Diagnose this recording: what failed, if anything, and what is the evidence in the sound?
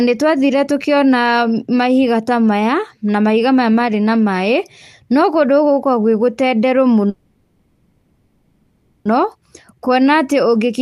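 Call audio freeze, 7.09 to 9.07 s: the speech stops and the last sound is drawn out as a fading buzz or hiss for about 2 s, then resumes exactly where it left off. The likely cause is delayed network packets draining the jitter buffer, so nothing is lost but playback now runs about 1.96 s later.

Jitter buffer slow-down, 9.75 to 10.08 s: the speech plays at 88% speed with its pitch unchanged, and sounds are stretched. The receiver's buffer stage repeated single pitch periods or bits of pauses to add about 45 ms and rebuild its reserve.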